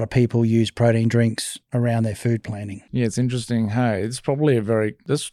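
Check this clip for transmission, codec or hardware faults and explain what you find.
No transmission, codec or hardware faults.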